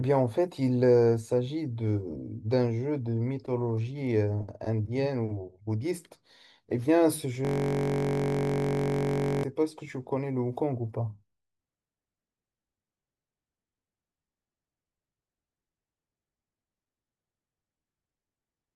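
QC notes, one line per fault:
7.45–9.44 s, system hang loop: the speech gives way to a steady buzz near 47 Hz for about two seconds. A single 21.33 ms slice repeats exactly while the system stalled and the audio hardware kept replaying its ring buffer, which fits a 1024-sample buffer.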